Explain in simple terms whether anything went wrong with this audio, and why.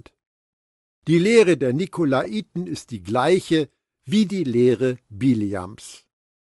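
Yes, a couple of things. The whole speech clip has a breathy, grainy sheen, especially on the higher sounds, which points to Bluetooth LC3 compression. That's likely the LE Audio codec throwing away fine high detail and filling the gap with noise, and here it's plainly audible.

Then at about 2.24 s, just before "ist die gleiche wie", there's a tiny smeared blip. That's lost LE Audio frames: roughly 15 ms went missing, about two short frames, and the decoder papered over the gap by repeating the last sound with scrambled detail.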